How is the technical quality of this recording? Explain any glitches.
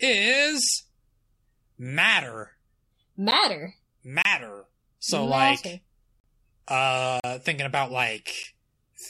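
The speech is interrupted five times by abrupt dropouts, each a block of digital silence. At 3.31 s and at 8.43 s, just after "thinking about", the gaps last about 11 ms and 9 ms and come across as ticks. Longer holes follow at 4.22 to 4.25 s (28 ms), 6.20 to 6.24 s after "matter like", and 7.20 to 7.24 s before "thinking about" (40 ms each). Each time, the sound cuts out and back with no fade, most likely because the output buffer wasn't filled in time.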